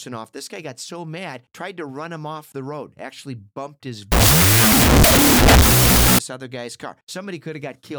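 From 4.12 to 6.19 s, right after "road actually bumped his" and before "other guy's car", the speech turns into a wrong sample width fault: 16-bit samples are read as unsigned 8-bit bytes, so each true sample splits into two values and only the high bytes carry the real waveform. The result is loud hiss with the speech buried beneath, playing at half speed and an octave lower. That slowdown distinguishes it from a byte-order swap, which is equally noisy but keeps the original speed.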